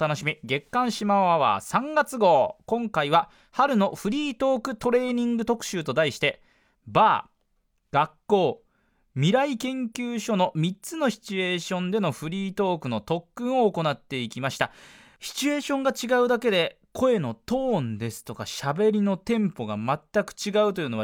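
No technical faults are audible.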